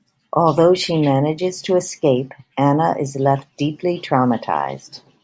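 No technical faults can be heard anywhere in the speech. There is nothing in the audio that needs a time marker or further explanation.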